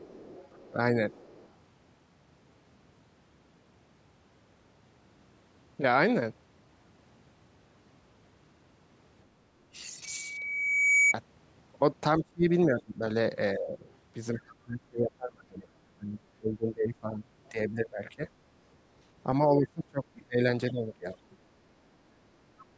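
Right from the start, 0 to 1.51 s, there's a faint second voice under the speech, about 25 dB down: other side's voice leaking through, most likely loudspeaker sound the echo canceller didn't fully strip from the mic. Inside that, at 0.71 to 0.79 s, the talker briefly dips by roughly 15 dB. That's speech suppressed in double talk: with both sides going at once, the canceller seems to have turned everything down.

The big one runs from 12.19 to 18.22 s. The speech keeps ducking, up to about 25 dB, in pieces adding up to around four seconds. Toward the end of that, 17.45 to 18.28 s, the far-end voice bleeds through again, about 30 dB down.

From 19.57 to 21.19 s there's another suppression stretch, roughly 20 dB deep and about a second in total. After that come two short scraps of leakage, at 21.3 to 21.36 s (about 35 dB down) and 22.59 to 22.66 s (about 30 dB down).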